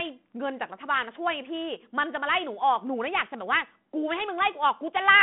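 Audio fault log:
No faults heard in this speech clip.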